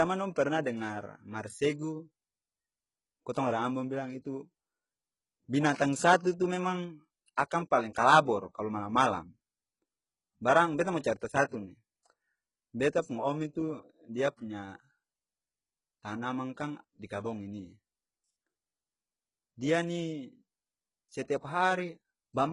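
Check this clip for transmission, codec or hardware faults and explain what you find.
Two kinds of fault are present: heavy codec damage across the whole clip, and two brief pre-echoes.

Throughout, the treble of the speech sounds synthetic, with gritty, lispy sibilants and no content at all above about 11.1 kHz. This is likely HE-AAC compression at a very low rate, around 12 kbps. The codec rebuilds the upper band by copying lower bands upward, so those harmonics don't match the originals.

At 6.23 to 6.26 s, and again at 7.36 s, a short hiss of about 25 ms and then 18 ms precedes an attack, which sounds softened and smeared. This is pre-echo: the transform codec spreads quantisation noise across its whole block, so noise sized for the loud attack leaks into the quiet moment before it.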